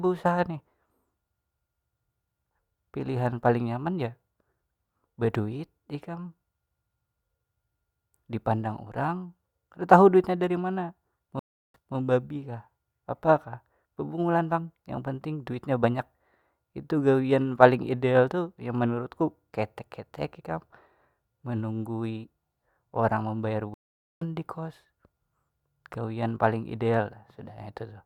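At 11.39 s and 23.74 s, stream reconnects occur: the connection broke and the player restarted its decoder mid-stream. The speech drops to 348 ms of silence, then resumes 220 ms earlier, repeating a moment. The second gap lasts 471 ms and resumes roughly 0.4 s later, skipping material.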